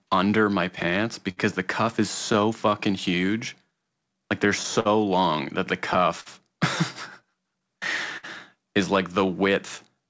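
Right from the start and running the whole way through this speech, there's clock drift between sender and receiver: the sending end's clock runs slow, by something like 5 percent. The receiver's buffer keeps draining, so it can't stay in step on its own.

That drives the repeated timing corrections you hear from 0.00 to 9.96 s. The receiver keeps stretching out little bits of audio, playing at about 98 percent speed and padding in around a fifth of a second overall. It comes across as a slightly dragging, uneven tempo with faint hiccups.

On top of that there are scattered short gaps in three stretches: roughly three between 0.83 and 2.36 s, another three or so between 3.59 and 4.87 s, and about five between 5.93 and 8.25 s. Each hole, the longest around 50 ms, got filled by extending the previous sound, so you get brief smears and ticks. Underneath, the call path tops out at 8 kHz, which fits G.722 at 64 kbps.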